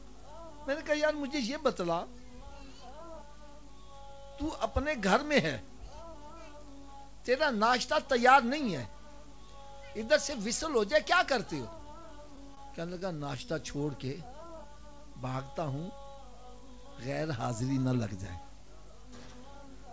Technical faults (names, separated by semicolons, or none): scattered short gaps; jitter buffer slow-down; jitter buffer speed-up